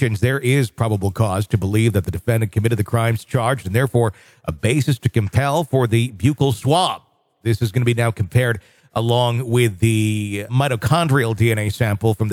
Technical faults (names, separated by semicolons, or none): none